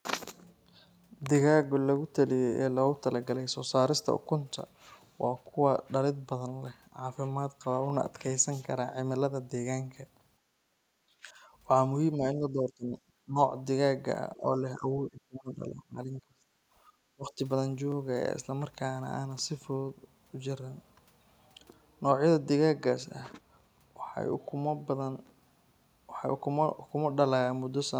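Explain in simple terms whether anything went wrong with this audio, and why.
Yes, three things went wrong. At 7.90 s and again at 17.92 s there is overlapping chunks: the audio was handled in 10-second pieces, and each new piece restarted about 21 ms too early, so that sliver plays twice. It's a tiny stutter that returns on a regular schedule, unlike a random dropout.

From 10.39 to 10.81 s, the background is gated by the echo canceller. While the far end's sound was playing, the canceller turned the microphone down, so the room noise briefly sinks and then comes back.

Between 11.09 and 17.39 s, the speaker's own voice dips or partly cuts out in short bursts, at 11.09 to 11.29 s, 12.16 to 12.97 s, 13.23 to 13.37 s, 14.35 to 14.91 s, 15.09 to 16.56 s and 17.15 to 17.39 s, the longest lasting about a second and a half. This is likely speech suppressed in double talk: both sides spoke at once, and the canceller mistook the talker for echo.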